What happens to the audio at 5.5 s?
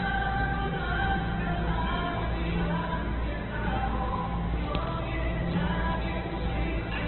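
At 5.5 s you're hearing the same thing as across the whole clip: heavy damage, likely from Opus compression at a very low rate, around 8 kbps. Nothing survives above about 4.1 kHz, and the sounds come out grainy and rough because bands are filled with folded or noisy stand-ins.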